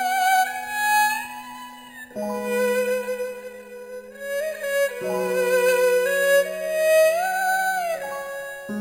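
Imaging from sample-and-hold upsampling runs throughout. Each sample was repeated with no smoothing filter. Spectrum copies appear, the lowest between 5.5 and 11 kHz, about 16 dB down. That fits an original rate near 11 kHz. It sounds like a bright metallic fizz whose level follows the sound.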